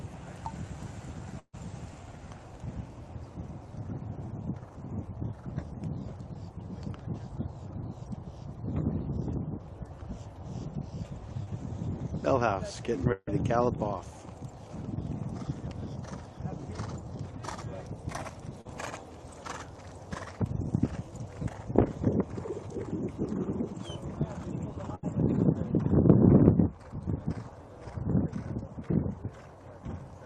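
Burst of packet loss at 1.39 to 1.55 s: about 140 ms of audio never arrived. The receiver stretched the last sound into a fading buzz or hiss, fell briefly silent, then resumed further on with that stretch missing.

Short concealed packet loss at 11.43 to 11.48 s: roughly 40 ms failed to reach the decoder in time. The receiver extrapolated the preceding sound and blended back, leaving a brief smear or wobble.

Burst of packet loss at 13.12 to 13.29 s: again about 140 ms was lost. A decaying continuation of the previous sound, followed by a short silent moment, covers the gap before the audio jumps ahead.

Short concealed packet loss at 18.61 to 18.67 s: another 40 ms hole was patched by continuing the prior sound, heard as a momentary smear or wobble.

Burst of packet loss at 24.95 to 25.05 s: about 80 ms went missing and was filled by a fading continuation of the last sound, with no silence before the audio resumes further on.

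The high end tops out near 12 kHz, which fits the Opus codec on the call path.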